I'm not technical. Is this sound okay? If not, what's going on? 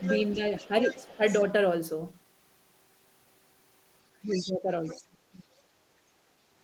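No. There are two related problems, both at the start and again near the end.

Other side's voice leaking through: from 0.0 to 1.45 s a second, quieter voice sits underneath the main talker, and it returns in two short scraps at 4.27 to 4.52 s and 4.84 to 5.04 s, fainter each time. The likely cause is that the talker's device plays the person on the other end through a loudspeaker, the microphone picks that up, and the echo-removal step lets some of it slip back into the call.

Speech suppressed in double talk: between 0.35 and 1.22 s the main voice dips noticeably, adding up to less than half a second. From 4.24 to 5.64 s the dips are much deeper, with parts of the voice nearly disappearing for about a second in total. This is likely the echo-removal step getting confused while both people talk at once and turning down the wanted voice along with the echo.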